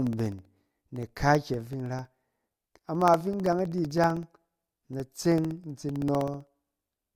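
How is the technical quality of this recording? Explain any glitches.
The recording has a steady ticking fault. From 0.07 to 7.11 s, periodic USB or driver dropouts blank about a millisecond of speech every 64 ms, heard as regular ticks.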